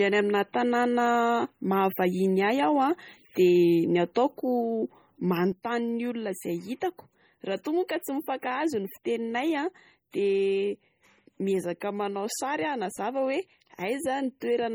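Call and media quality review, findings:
MP3 compression across the whole clip. Heavy codec damage: watery, swirly speech, smeared attacks. Likely cause is an MP3 encode at a low bitrate, consistent with about 32 kbps. Weak frequency lines drop in and out between frames. Nothing above 21 kHz.

Sudden gain jump at 5.52 s, lasting to the end. Level drops by about 6 dB in one step, with speech and background noise falling together. There is no ramp. Likely cause is a digital gain setting or bit shift applied between two samples.

Pre-echo at 7.64 s. A short hiss spreads about 17 ms ahead of a sharp attack, which sounds soft. Probable component is the transform codec. Noise sized for the loud attack fills the quiet part of the block before it.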